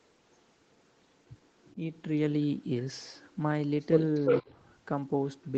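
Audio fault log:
1.61–1.76 s, 4.14–4.44 s: echo leak. A delayed copy of the speech comes back about 0.35 s late. The first scrap is faint, around 30 dB below the speech. The second is much stronger, roughly as loud as the speech itself. The likely cause is a far end playing the call on a loudspeaker, with its echo canceller letting part of the pickup through and sending it back.
4.42–4.55 s: speech suppressed in double talk. The speech dips by up to about 10 dB, over roughly 150 ms in total. This comes right as the loud echo overlaps the talker. The likely cause is the echo canceller failing to tell the talker from the returning echo and turning both down together. The result is a brief drop in level.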